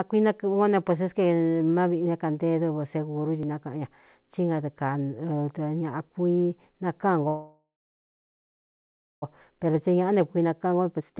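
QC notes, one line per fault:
3.43 s, repeated buffer: right before "nákaꞌan ña tí" there's a tiny click where a very short slice of audio got played twice. The next chunk didn't arrive in time, so the device replayed the last one. That slice is only about 1.33 ms, which fits a 64-sample buffer. It repeats once, so you hear a click at the hard join rather than a stutter, and essentially nothing is lost.
7.28 to 9.24 s, call audio freeze: the sound stalls for about 1.94 s. The last bit of sound is stretched into a fading buzz, then about 1.57 s of that is near silence. The likely cause is packets held up in transit until the jitter buffer ran dry. When they arrive, the audio picks up exactly where it stopped. Nothing is missing, but everything after is now about 1.94 s later.
9.50 to 11.19 s, jitter buffer speed-up: after the freeze, the receiver has a backlog and trims it by snipping out short pitch-period-sized pieces over and over. 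It drops roughly a third of a second in total, so the speech runs at about 116% speed. The pitch stays the same, but the delivery sounds rushed through to the end. Like the rest of the clip it's band-limited to 4 kHz, consistent with narrowband telephone coding.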